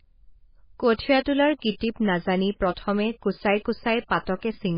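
Speech with heavy MP3 compression throughout, likely from a very low bitrate near 16 kbps: watery, swirly smearing, and a spectrogram shows a hard ceiling at 5.1 kHz.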